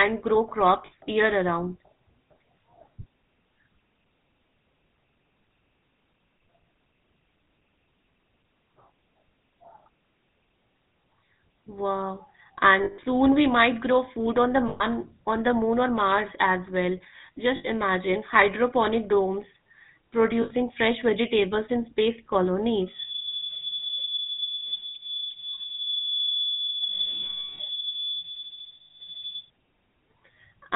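Speech runs with a buzzy, gravelly roughness and no content above 4 kHz throughout, which fits GSM full-rate codec coding at 13 kbps, with its pulse-driven vocal-tract model and band limit. Brief rough, metallic rings that hold the sound come at 0.86 s (60 ms, just before "year around"), 12.84 s (140 ms), 14.68 s (120 ms, between "grow food on the" and "on the moon or"), 17.56 s (80 ms, after "as well" and before "imagine hydroponic domes"), 20.42 s (80 ms), 24.65 s (80 ms), 26.88 s (120 ms) and 28.78 s (220 ms). These are lost GSM frames, each covered by repeating the last good frame. From 22.84 s to 29.50 s a thin, steady whistle at 3.4 kHz sits about 5 dB below the speech, swelling and fading slowly, likely a feedback whistle from a loudspeaker-to-microphone loop held just at the edge of feedback.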